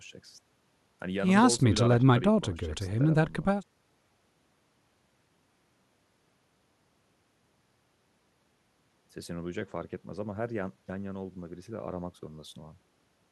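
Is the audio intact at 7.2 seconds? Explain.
Yes, at 7.2 seconds the speech runs through cleanly, with no dropout, click, distortion or other break in the signal.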